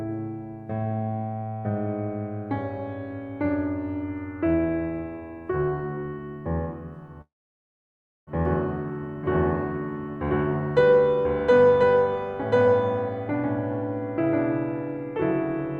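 At 7.21 s the music cuts into a long network dropout that runs to about 8.31 s. What you hear is the last bit of sound smeared on as a fading buzzy tail, then close to a second of near silence while nothing is getting through. When the music returns, roughly a second of it has simply gone, and the timing lands a touch later, around 50 ms. That most likely comes from the stream stalling and the receiver's buffer stretching to cover it.

From 8.45 s right through to the end there's a doubled audio track. A second full-band copy of the music trails the first by about a second, at about the same level, so everything gets a flat, dry echo with no room decay. It doesn't fade in. It just switches on. That points to the audio likely being picked up a second time through a slower path after the dropout, with the two copies never realigned.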